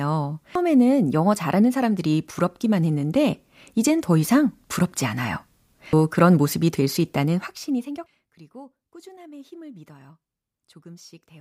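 At 0.55 s, just before "영어 잘하는 사람들이 부럽기만", a short disturbance marks damaged data in a compressed stream. The decoder hits corrupted bytes, cannot parse the frame, loses sync and skips ahead to the next valid header, so a brief glitch results. The same fault recurs at 5.93 s, between "더 이상 부럽지 않아요" and "그런 모습이 될 수", and at 8.06 s, right after "될 수 있다는 확신이".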